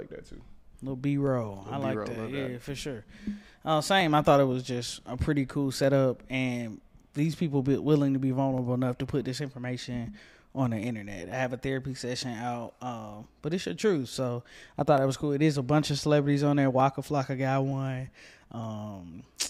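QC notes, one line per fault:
0.36–18.64 s, clock drift buffer slips: a regular click every 0.91 s, about twenty in all. Likely mismatched clocks, a few hundred ppm apart, slipping small sample blocks.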